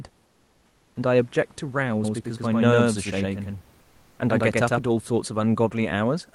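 From 0.25 to 0.95 s there's comfort noise in place of the background. The real room noise, sitting about 37 dB under the speech, drops out for 700 ms and a smooth, featureless hiss takes over, about 4 dB quieter. That's likely discontinuous transmission of the Opus DTX kind: the sender went quiet during the pause and the receiver filled it with synthetic noise shaped roughly like the room.

Then from 2.04 to 4.86 s you get a doubled audio track. A second full-band copy runs roughly a tenth of a second behind, about as loud as the original, with no reverb tail or room colour, and it cuts in and out abruptly at both ends. It's likely a slower capture path or an edit stacking two out-of-step copies. Inside that stretch, from 3.81 to 4.19 s, comfort noise again replaces the background for 380 ms, this time about 2 dB quieter.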